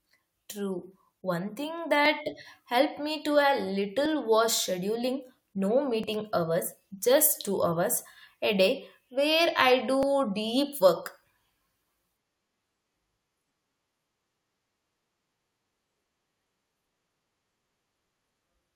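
In this speech there's a small click or skip at 2.06 s (just before "helped me"), then 4.06, 6.04, 8.03 and 10.03 s, every 2 s. That's an overlap between stream segments: overlapping timestamps at each segment boundary make the player trim a few milliseconds of real audio, so the waveform jumps.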